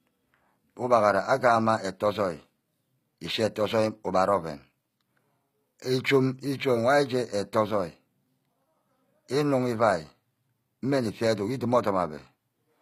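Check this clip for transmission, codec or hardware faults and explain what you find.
One codec fault runs through the whole clip. HE-AAC compression is likely: the treble above the crossover is rebuilt by copying lower bands upward, so sibilants sound gritty and metallic, consistent with a low bitrate near 24 kbps. A spectrogram shows smeared, repeated upper-band patterns and nothing above 15.4 kHz.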